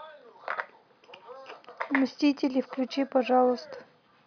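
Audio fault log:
No faults found in this clip.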